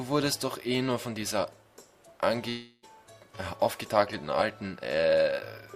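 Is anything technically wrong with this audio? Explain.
Yes. From 2.49 to 2.85 s the sound gives way to a fading buzz lasting about 0.33 s, then an instant of silence, and resumes with 340 ms lost. This is a long network dropout: audio likely stopped arriving, so the receiver stretched the last sound to fill the gap.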